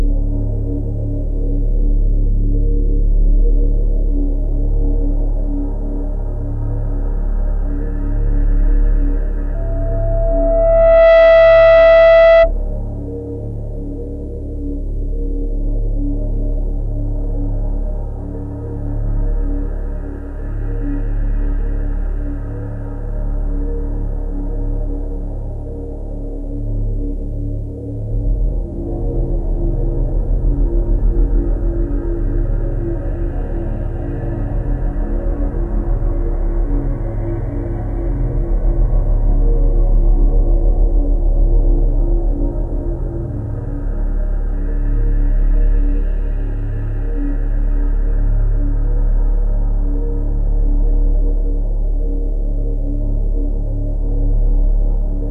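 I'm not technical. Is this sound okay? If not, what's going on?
No. From 9.54 to 12.52 s there's loudspeaker feedback squeal: a microphone picked up its own loudspeaker and fed that sound back round. A single 661 Hz tone swells over about a second and a half into a piercing squeal, well above the other sound.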